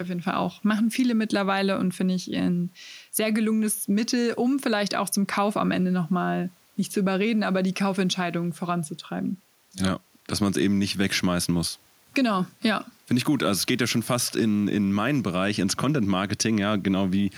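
No technical faults can be heard anywhere in this speech recording. Nothing in the audio calls for a timestamp or comment.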